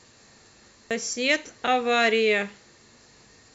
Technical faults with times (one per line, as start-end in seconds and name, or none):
0.91 damaged data in a compressed stream